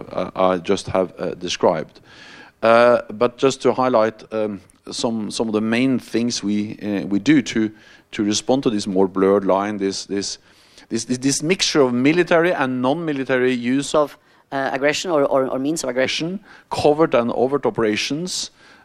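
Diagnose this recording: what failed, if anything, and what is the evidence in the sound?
A section at the wrong speed runs from 13.95 to 16.05 s: the sound plays 1.21 times too fast and rises about three semitones, then drops back. The likely cause is an editing or playback stage resampling that stretch against a mismatched clock.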